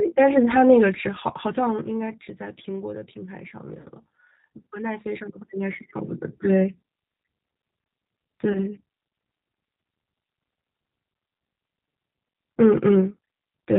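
Rough, slightly synthetic speech, with everything above 4 kHz missing throughout. This is the sound of the G.729 codec at 8 kbit/s, which rebuilds each 10 ms frame from a vocal tract filter, a pitch predictor and a few pulses. The damage is plainly audible across the whole clip. At 3.81 to 3.87 s and again at 8.53 to 8.65 s, the speech briefly smears into a buzzy tone or coloured noise that fades, and stays weak for a moment after. This is VoIP packet loss concealed by the speech codec. About 40 ms and then 20 ms of audio went missing, consistent with two packets and then one at 20 ms each. The decoder stretched its last pitch and filter to fill each gap, and because each frame builds on the previous one, the second dropout's distortion lingers well past the lost audio.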